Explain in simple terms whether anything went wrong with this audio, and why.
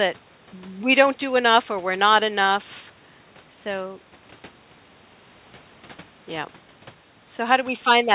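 Nothing went wrong here; it's ordinary phone-call speech.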